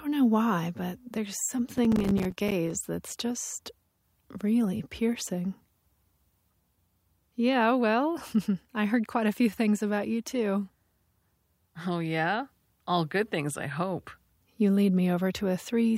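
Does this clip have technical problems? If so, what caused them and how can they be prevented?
Yes. From 1.78 to 2.70 s there is a burst of processor overload crackle: the processor could not finish its small audio buffers on time, missing roughly thirty deadlines over that stretch, with buffers of around 5 ms. Each missed buffer came out as a short silent gap with hard edges, and these rapid dropouts run together into gritty crackle over the speech until the load clears. To prevent it, reduce competing processor load or use a larger buffer so each deadline has more headroom.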